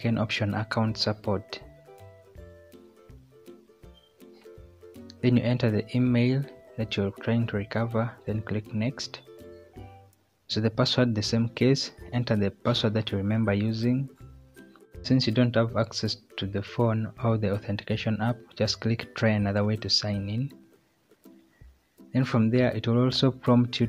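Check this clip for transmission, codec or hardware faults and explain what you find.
There's one fault, a short burst of CD scratch ticks from 20.38 to 21.40 s. You get five small ticks in that second, so about five a second, each under a millisecond, the longest about 0.7 ms. That rhythm comes from a scratch passing the laser once per turn of the disc, wiping out more data than error correction can rebuild. The player patches those few samples by interpolating or muting them, and each patch lands as a tiny click.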